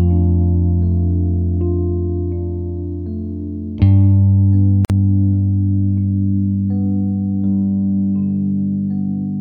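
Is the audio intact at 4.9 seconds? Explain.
No. A gap at a join of encoded pieces: untrimmed encoder delay and padding leave a 50 ms gap from 4.85 to 4.90 s, cutting the music briefly before it resumes.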